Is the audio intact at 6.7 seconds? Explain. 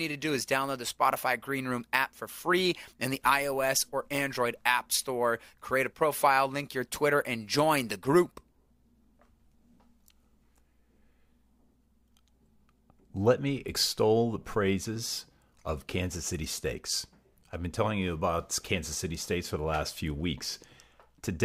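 Yes, at 6.7 seconds the speech runs through cleanly with no audible fault.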